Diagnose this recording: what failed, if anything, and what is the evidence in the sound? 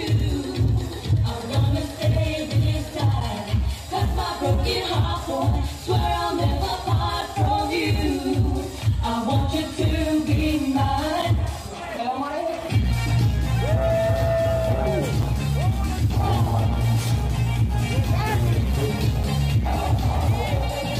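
A gap between chunks at playback or storage: hard-edged 7 ms silences at 3.20, 7.21, 11.22, 15.22 and 19.23 s, one per 4-second chunk, from late chunk starts or padding.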